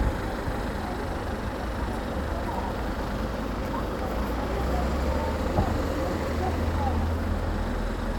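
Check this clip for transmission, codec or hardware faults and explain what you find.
Nothing faulty turns up anywhere in this recording.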